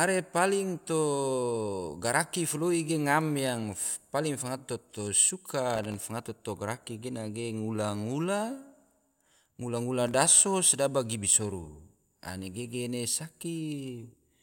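Speech marred by processor overload crackle from 5.76 to 6.10 s and from 10.08 to 10.35 s. Rapid runs of tiny hard-edged silent gaps suggest very short buffers, under a millisecond, repeatedly missing their deadlines. A single dropout would leave one clean hole instead of gritty tearing.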